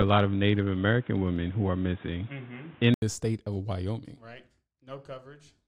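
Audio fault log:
0.00–3.02 s, input switched to a poorer device: the speech is dull and boxy, with nothing above 3.8 kHz, background noise roughly 30 dB down and a level about 5 dB different, then clears after an 80 ms gap, likely a narrowband microphone handing back.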